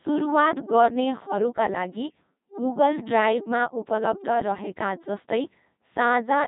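From start to finish the speech has passed through the Codec 2 vocoder, heavily damaged, with nothing above 3.8 kHz. The voice is rebuilt from sine waves, so it sounds robotic and buzzy, unlike ordinary low-bitrate codecs that keep the waveform. The rate fits a 2.4 kbit/s mode.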